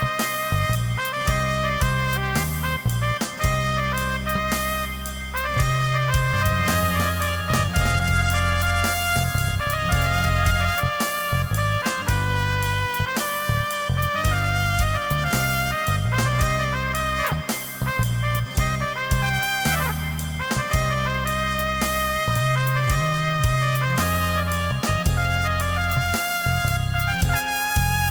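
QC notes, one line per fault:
6.33–10.75 s, doubled audio track: The likely cause is a second capture path or an edit that laid the same material in twice, out of step. A full-band copy trails the original by roughly 300 ms at a level around 5 dB lower, so every onset is followed by a distinct, slightly quieter repeat with no room colour or decay on it. The copy cuts in abruptly at 6.33 s and drops out just as abruptly at 10.75 s.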